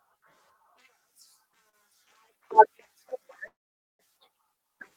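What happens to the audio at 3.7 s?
A call audio freeze runs from 3.47 to 4.02 s. The last sound trails off briefly, then about 470 ms of silence follows. Packets were likely delayed and the jitter buffer emptied. The speech then resumes where it stopped, about 520 ms late.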